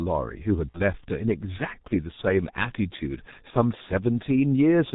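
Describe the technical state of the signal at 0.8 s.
At 0.8 s the signal sits inside a stretch of VoIP packet loss concealed by the speech codec, running from about 0.72 to 0.81 s. The gap fits a single lost 30 ms frame that the decoder filled by repeating its last pitch and spectral envelope at falling gain. It sounds like a brief stretched, smeared sound that fades before the sound resumes. On a spectrogram the harmonics run flat and unchanging across the gap, and the waveform shows a repeated, decaying pitch cycle.

Underneath this, and throughout the clip, is G.723.1 codec damage, heavy here. Its character fits the 6.3 kbit/s mode. The codec discards everything above 4 kHz and updates its vocal-tract model only once per 30 ms frame, so the speech sounds muffled and hoarse, with consonants blurred. A spectrogram shows a hard ceiling at 4 kHz and coarse, blocky changes in the formants from frame to frame.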